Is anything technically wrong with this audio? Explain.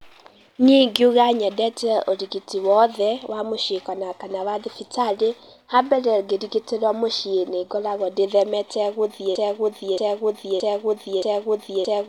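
Yes. From 9.35 s, right after "mũcĩĩ nĩngoragwo ndĩthemete gũthiĩ", a broken-record loop runs to the end: a 0.62 s fragment repeats exactly four times. The player or stream likely stalled, resending its last buffer, and the intended speech is lost. The waveform and spectrogram show identical blocks tiled back to back.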